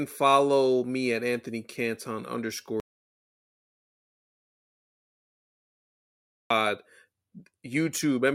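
At 2.8 seconds the speech just stops dead, and nothing comes back until 6.50 seconds. That's an audio dropout to silence, about 3.7 seconds of it. The gap is silent, with no room tone or hiss underneath, so it's not a pause in the talking. Most likely the input got cut off, maybe a loose connection or a mute, while the recorder kept writing silence. Whatever was said in there is gone.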